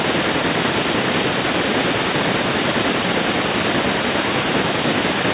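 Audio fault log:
No faults are heard in the speech. The call path band-limits it to nothing above 4 kHz, which fits G.711 A-law at 64 kbps, and the room noise sits about 41 dB below the voice.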